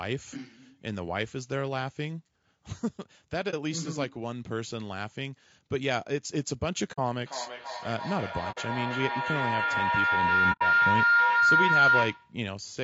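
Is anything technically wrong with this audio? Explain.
Yes. Throughout the speech the audio sounds rough and grainy, with noise filling the gaps between harmonics and a thin, synthetic-sounding top band. This is likely low-delay AAC compression (AAC-ELD): its short frames resolve pitch harmonics poorly, and the damage is plainly audible at what sounds like a bitrate around 32 kbps.

Four brief holes occur where AAC frames were lost and the decoder muted them: 3.50 to 3.54 s (30 ms), 6.92 to 6.99 s (60 ms), 8.51 to 8.58 s (60 ms) and 10.52 to 10.63 s (90 ms). Because overlapping windows fade the missing spectrum out and back in, each gap is soft-edged.

From 7.26 to 12.43 s there is a feedback howl. A microphone-to-loudspeaker loop gains level on each trip, so the repeats grow instead of decaying and narrow to a tone around 1.5 kHz, with the loop repeating roughly every 300 ms. At its loudest it sits about 8 dB above the speech.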